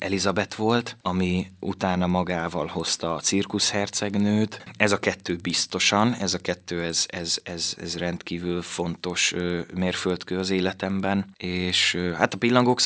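Ticking at 10 per second runs through the speech clip wherever there is signal. The resampler restarted on every 100 ms block, leaving small errors at each block edge, likely from converting 44.1 kHz down to 16 kHz.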